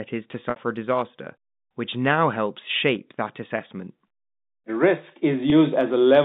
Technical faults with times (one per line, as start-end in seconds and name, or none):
0.50-0.56 packet loss with pitch repetition
5.50-5.52 packet loss with pitch repetition